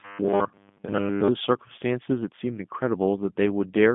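Speech passed through a G.729 codec from start to finish, with plainly audible coding damage. Nothing above about 3.8 kHz survives, and the low end thins below roughly 150 Hz, which fits a narrowband telephone line. At what sounds like 8 kbit/s, each 10 ms frame is rebuilt from a vocal-tract filter, a pitch predictor and a few pulses, giving a rough, slightly synthetic buzz. A plain band-limited line would sound muffled but smooth rather than roughened like this.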